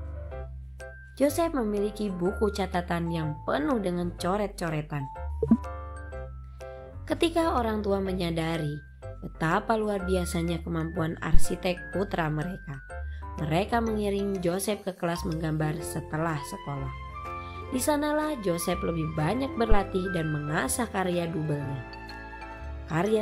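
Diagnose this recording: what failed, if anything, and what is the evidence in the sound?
Two phantom power thumps point to a fault at the analogue input stage. The first, at 11.34 to 11.49 s, peaks at about -4 dBFS and decays within 33 ms. The second, at 19.72 to 19.80 s, reaches about -8 dBFS and dies away in 19 ms. Each is a switched supply voltage stepping through the coupling capacitors. Their deep, decaying low-frequency body separates them from a short broadband click or digital glitch.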